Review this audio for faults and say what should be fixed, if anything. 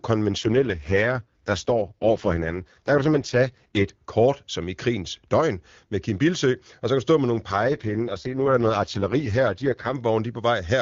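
AMR rate drop from 0.37 to 3.91 s, ending before "kort som i krigens", and from 7.51 to 9.95 s, after "stå med nogle". The speech turns raspy and synthetic, which fits a fall to the lowest AMR-WB mode, near 6.6 kbit/s. A spectrogram shows smeared, noisier harmonics with unchanged bandwidth, and the waveform shows no gaps. To prevent it, improve radio coverage or signal strength so the link stays at the full rate.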